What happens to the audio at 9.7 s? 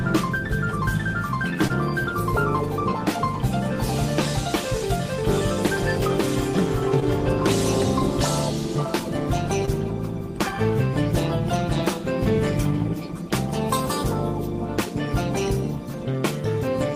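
A brief smear at 9.65–9.69 s: short concealed packet loss, where 20 ms of audio never arrived and the decoder stretched the preceding sound across the gap.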